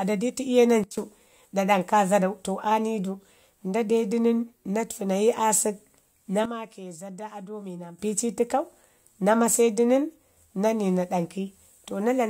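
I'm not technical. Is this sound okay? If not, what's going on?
No. The speech has two sudden gain jumps. From 0.84 to 0.98 s, and again from 6.46 to 7.99 s, everything abruptly turns much quieter, background hiss included, then snaps back, likely a volume setting applied without smoothing. Unlike a fade, there's no gradual slide, and unlike a dropout, the sound never vanishes.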